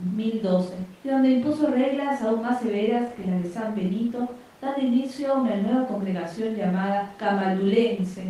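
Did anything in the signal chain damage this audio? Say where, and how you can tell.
No, nothing along the way seems to have touched this speech recording; I can't hear anything that points to a problem at any stage.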